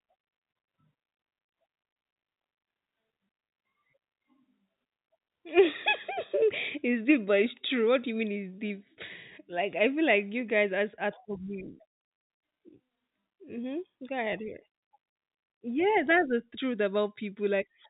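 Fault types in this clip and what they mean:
No faults: telephone-band speech with nothing above 3.8 kHz, consistent with G.711 mu-law coding at 64 kbps.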